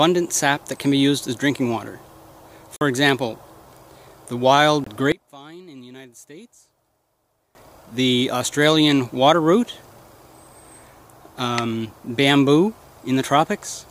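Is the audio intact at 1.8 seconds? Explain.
Yes, at 1.8 seconds the audio is intact, with no dropout, click, distortion or other fault at that point.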